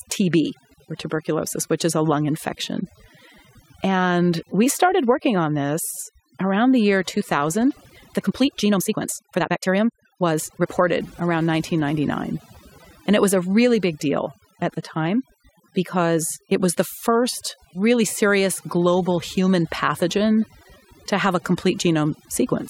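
Throughout the clip, overdone noise removal cuts individual frequency bands near its noise estimate, leaving a lowered, twinkling background. From 7.66 to 10.68 s, a time-stretched section, likely from software dropping short slices, runs 1.73 times fast, so the speech sounds rushed at an unchanged pitch.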